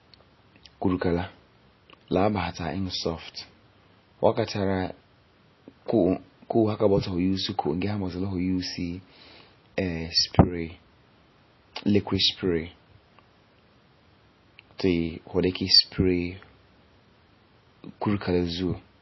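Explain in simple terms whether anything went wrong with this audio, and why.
Likely heavy MP3 compression, from start to finish: the encoder dropped everything above 5.8 kHz, so the speech sounds muffled, dull and noticeably watery.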